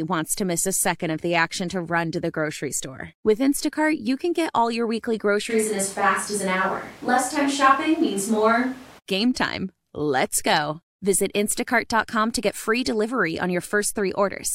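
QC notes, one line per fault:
5.52–8.97 s, switch to a distant microphone: right after "get all your weekly" the speech abruptly turns roomy and hollow, with the low end thinned out and room noise rising to roughly 25 dB below the speech, though the overall level hardly shifts. It snaps back to the close, full sound just before "game time". Likely the close mic dropped out and a mic farther away, hearing more room than voice, covered the gap.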